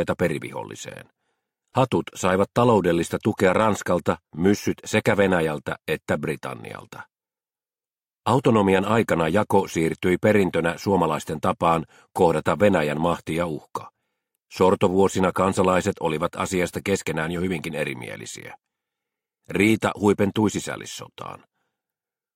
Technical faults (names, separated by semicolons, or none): none